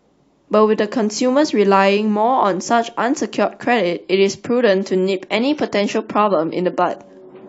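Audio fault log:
4.02 to 7.48 s, adaptive stream at a lower bitrate: at 4.02 s the speech suddenly goes swirly with no gap, which fits the stream switching down from roughly 96 to 32 kbit/s AAC for the rest of the clip.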